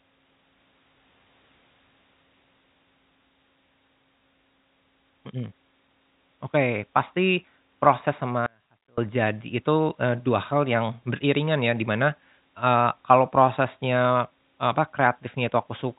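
At 8.46 s, just after "pasti proses", the speech drops out to a faint residue. The loss lasts about 0.51 s, until 8.98 s. The cut is abrupt, not a pause or a fade. A faint trace of sound stays in the gap, far below the normal level. The path downstream stayed live while the wanted signal was briefly lost, likely through a break upstream. The G.711 telephone band limit, with nothing above 3.8 kHz, is audible on both sides of the gap.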